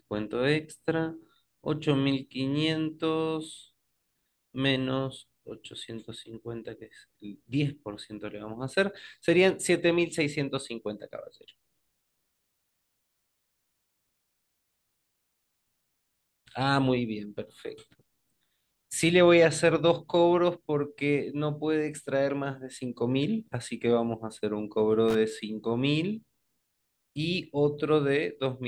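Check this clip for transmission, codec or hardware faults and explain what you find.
One hardware fault turns up in the speech, a loose connector crackle from about 25.09 to 25.15 s. A worn or dirty contact briefly makes and breaks, chopping the signal into an irregular burst of scratchy crackle lasting roughly 60 ms. On a waveform it shows as jagged dropouts and spikes; on a spectrogram, as ragged broadband vertical streaks.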